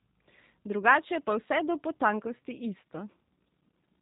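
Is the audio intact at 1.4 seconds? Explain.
No. G.729 codec damage runs through the whole clip, including 1.4 s. The speech is rebuilt from a vocal tract filter, pitch predictor and a few pulses per frame, consistent with 8 kbit/s, leaving it rough and synthetic with nothing above 3.8 kHz.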